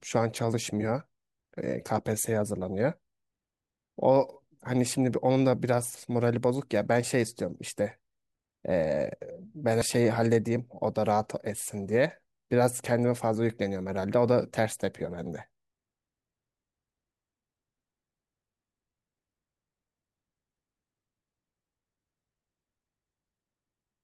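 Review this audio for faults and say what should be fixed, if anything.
At 9.82 s there is a skip consistent with audio missing between chunks: about a tenth of a second vanishes and the two sides butt together with no silence, likely where 6-second recording chunks were closed and reopened. The waveform shows an abrupt discontinuity there, and the spectrogram shows a vertical seam where the content jumps. To prevent it, keep a continuous buffer running across chunk boundaries, or overlap consecutive chunks and trim the overlap, so nothing is dropped during the handover.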